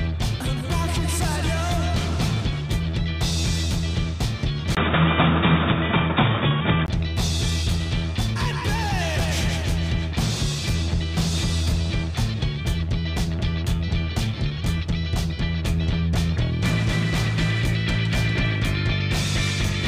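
From 4.75 to 6.88 s the audio turns dull and boxy, with nothing above 3.8 kHz, a 20 ms silence at the switch, a level shift of about 5 dB and new background noise about 40 dB down, likely an input switched to a poorer device.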